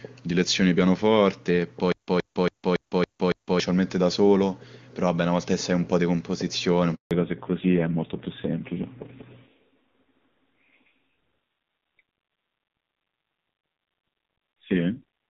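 A speech recording carried over HD Voice (AMR wideband), whose opening section has the full, clear band of a high-rate mode, shows three faults. From 1.92 to 3.60 s there is a stutter with silent gaps: a 121 ms burst repeats six times at a steady 280 ms period, separated by 158 ms of digital silence, most likely a stalled stream replaying its last fragment. At 6.95 s a 160 ms handover gap cuts the voice to silence until 7.11 s, consistent with frames lost during a network switch. From 7.11 s to the end the call falls back to narrowband: nothing above 4 kHz remains, and the voice turns dull and rough, which fits a low-rate AMR narrowband mode.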